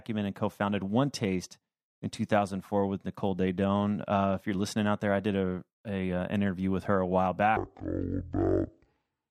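Speech clip where, from 7.57 s to the end at 9.30 s, a section at the wrong speed plays back at 0.51 times its recorded rate, likely from that stretch being run against a mismatched clock. Speed and pitch fall together, so the voice drops roughly ten semitones and drags to about half pace.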